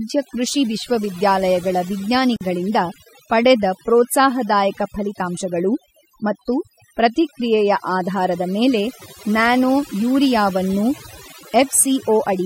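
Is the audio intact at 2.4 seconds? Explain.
No. A gap at a join of encoded pieces opens from 2.36 to 2.41 s, a silence of about 47 ms. Two separately encoded pieces were joined untrimmed, so one's padding and the next one's start-up delay remain. The sound stops, then resumes where it left off.

Overdone noise removal is also active here. Bands near the estimated noise floor are pushed far down, taking quiet parts of the voice with them. The background drops and breaks up into twinkling specks.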